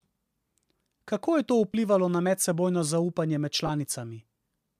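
At 1.72 to 1.74 s, just before "na medsebojno zaupanje med", the speech briefly turns into a short, noisy smear, and the same happens at 3.67 to 3.70 s, right after "na medsebojno zaupanje med". These are lost LE Audio frames. About 20 ms of audio went missing each time, which fits two 10 ms frames, and the LC3 decoder likely filled the gap by repeating the last spectrum with scrambled signs.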